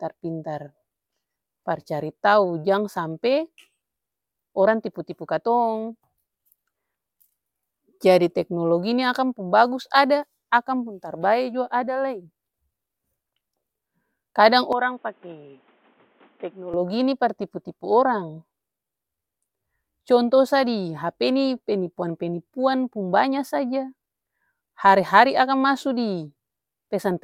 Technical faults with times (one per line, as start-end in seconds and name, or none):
14.73-16.74 input switched to a poorer device